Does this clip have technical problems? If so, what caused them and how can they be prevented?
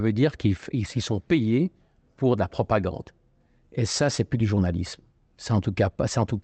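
Yes. Short concealed packet loss occurs at 4.55 to 4.58 s. About 20 ms of audio arrived too late, and the decoder papered over the hole with extrapolated sound, leaving a brief smear. A larger jitter buffer or forward error correction would prevent it.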